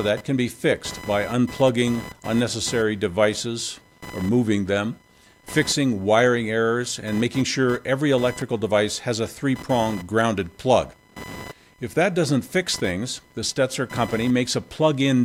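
Throughout, computer activity noise: load changes on the computer disturb the audio circuit's shared ground, adding a buzzing chirp around 1 kHz, roughly 20 dB below the sound.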